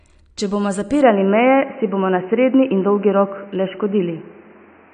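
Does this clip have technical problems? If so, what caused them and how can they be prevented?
Yes. Right through the speech there's AAC compression damage, and it's plainly audible: nothing comes through above about 9.6 kHz, so the top end is dull, and sibilants get that smeared, fizzy texture. The likely cause is low-bitrate AAC-LC, which fits something around 32 kbps. The encoder drops the high band and quantises what's left coarsely, so detail smears. To prevent it, encode at a higher bitrate, or keep the recording uncompressed until the final export.

Then at 1.02 s the sound suddenly narrows and goes boxy, and it stays that way to the end. Everything above about 3 kHz disappears, the level shifts by roughly 5 dB, and a new noise floor comes in, around 30 dB below the speech. There's no gap at the switch. That's most likely the input switched to a poorer device, such as a headset's call profile taking over mid-recording. 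To prevent it, pin the input device in the recording app and turn off automatic switching on the headset.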